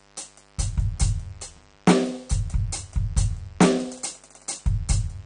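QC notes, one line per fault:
Throughout, mains buzz. A steady, raspy buzz sits under the music for the whole clip, roughly 35 dB below it. Its fundamental is 50 Hz, so the fault comes from a 50 Hz supply. Sharp switching spikes enter the signal twice per mains cycle. Each spike adds a stack of harmonics that climb well into the kilohertz range. That is why it rasps rather than hums.
Throughout, AAC compression. The music sounds dull and smeared, and nothing is left above 9.7 kHz. The damage is plainly audible, with warbling on sustained tones and fizzy highs. The likely cause is AAC-LC coding at a low bitrate, around 32 kbps. The encoder lowered its cut-off to save bits. It also coarsely quantised the remaining frequency lines, which leaves gaps and swirling texture in the spectrum.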